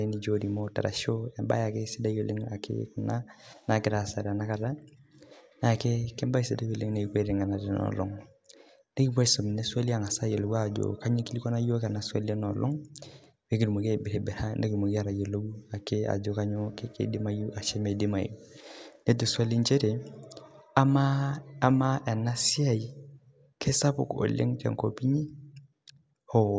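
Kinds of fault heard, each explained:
No faults heard.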